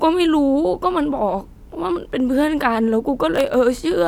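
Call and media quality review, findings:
Processor overload crackle, 3.35–3.54 s: brief gritty tearing over the speech, then clean. Audio thread missing deadlines, several short buffers of around 5 ms running late in a row. Each miss replays stale audio with hard edges, producing the crackle.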